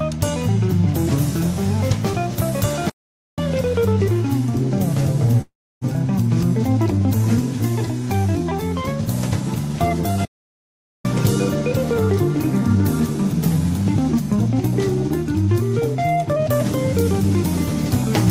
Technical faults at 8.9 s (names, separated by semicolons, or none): none